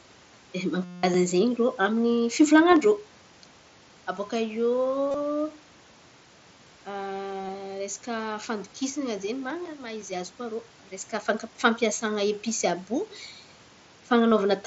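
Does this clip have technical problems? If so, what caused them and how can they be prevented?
Yes, concealed Bluetooth headset packet loss at 0.85–1.03 s, 2.71 s, 5.06–5.22 s, 7.42–7.49 s and 14.30 s. The phone filled lost headset packets by repeating a recent stretch of waveform, so the 0.19 s run becomes a steady buzzy tone at full level rather than the silent gap of a plain dropout. Keeping the headset close to the phone, away from Wi-Fi congestion, prevents it.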